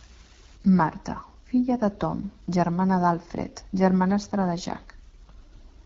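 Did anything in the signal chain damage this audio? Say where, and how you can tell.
Yes. At the codec stage, the AMR wideband (HD Voice) codec damages the speech throughout, giving it a rough, raspy texture. That points to one of AMR-WB's lowest rates, around 8.85 kbit/s, where the pulse-driven model is too coarse to reproduce the voice cleanly.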